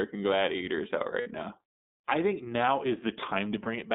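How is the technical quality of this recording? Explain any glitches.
The recording has audible technical faults: the whole clip carries narrowband codec damage, and the speech breaks up briefly twice.

iLBC codec, throughout: the audio is confined to roughly 150 Hz to 3.7 kHz, and the speech sounds plainly rough and synthetic. The coder models each short frame's excitation independently, which fits the 20 ms, 15.2 kbps mode, and discards everything above the telephone band.

Lost iLBC frames, at 1.20 to 1.28 s and 3.64 to 3.68 s: the first gap lasts about 60 ms, which fits three missing 20 ms frames, and the second fits one. The decoder fills each gap by repeating the last pitch cycle mixed with noise, so it sounds like a held, faintly buzzy vowel before the speech snaps back almost at once.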